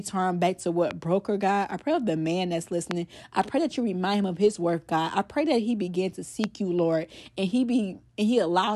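At 0.91 s, between "back to" and "broke her", a loud pop cuts in, followed by two more at 2.91 s (after "of the man that's") and 6.44 s (after "that he begin to"). Each is a single sharp click lasting about 20 ms, well above the speech level, with speech continuing underneath. The likely cause is a brief voltage spike entering the chain. On a waveform each shows as a tall isolated spike; on a spectrogram, a thin vertical line spanning all frequencies.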